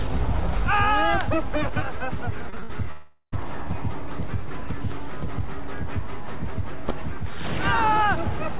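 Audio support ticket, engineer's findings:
Repeated packet loss (robotic sound), 2.5–2.71 s: choppy stretch with pieces missing. Four short gaps, longest 57 ms, patched by stretching the previous audio. Roughly half the span is concealment. The jitter buffer/loss concealment is filling successive lost or late packets.

Long network dropout, 2.91–3.34 s: the audio smears into a fading buzz, ending in about 70 ms of silence, then resumes with about 0.4 s missing. Likely a network outage, with the receiver extending the last frame until concealment gave out.

Both events sit on a band-limited path with nothing above 4 kHz, which points to G.711 mu-law at 64 kbps.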